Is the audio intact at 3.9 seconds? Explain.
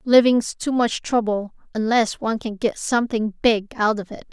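Yes, the audio is intact at 3.9 seconds, with no fault at that moment.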